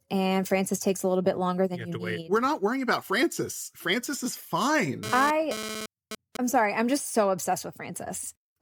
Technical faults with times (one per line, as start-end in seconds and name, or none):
5.03-6.37 GSM phone buzz